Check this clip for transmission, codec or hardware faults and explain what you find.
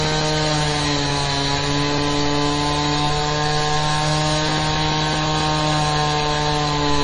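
Two kinds of fault are present. Throughout, the audio has nothing above 10.5 kHz and sounds watery and swirly, with smeared attacks. This is likely MP3 compression, with heavy damage that fits a bitrate around 32 kbps.

At 3.3 s and 5.26 s, the sound jumps ahead without any silence. These are likely dropped buffers (overrun), where samples were overwritten before being read. The first gap is a few tens of milliseconds long, and the second is shorter.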